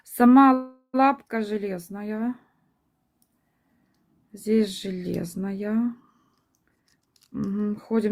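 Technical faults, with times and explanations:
0.53–0.96 s, call audio freeze: the sound stops moving forward and the last moment is drawn out as a fading buzz or hiss for about 0.4 s, ending in a brief silence of around 30 ms before the audio resumes exactly where it left off, with nothing skipped. The likely cause is packets held up in transit until the jitter buffer ran dry, so the receiver stretched the last sound while waiting. The wait adds about 0.4 s of delay to everything after it.
6.69–8.06 s, jitter buffer speed-up: the sound rushes ahead at about 126% of its normal rate while its pitch stays unchanged, giving a hurried, compressed feel. The jitter buffer had built up more audio than it aims to hold, so the receiver cut many short slices, each one or a few pitch periods long, in quick succession. Altogether roughly 0.4 s of audio was removed, bringing the delay back down.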